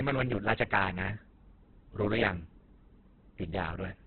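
Throughout the speech, nothing reaches above about 4.4 kHz, and the remaining band sounds rough, grainy and noisy. This points to heavy Opus compression, likely in its CELT music mode at a very low bitrate near 8 kbps, filling starved bands with noise and folded content.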